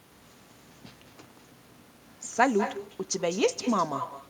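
Speech with echo and no canceller, throughout. Every phrase returns about a fifth of a second later, about 10 dB quieter and thinner, picked up from a far-end loudspeaker.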